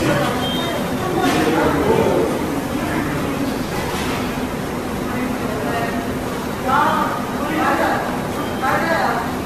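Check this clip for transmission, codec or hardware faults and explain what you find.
One fault runs through the whole clip: generation loss. From start to finish the sound is swirly, smeared and hollow, with blurred attacks and nothing above 14 kHz. The likely cause is repeated lossy coding, decoded and re-encoded around seven times in a chain that fits AAC-LC at 64 kbit/s. Each pass quantises the audio again on a shifted frame grid. The noise and spectral gaps pile up, so the damage is worse than a single 64 kbit/s encode would produce.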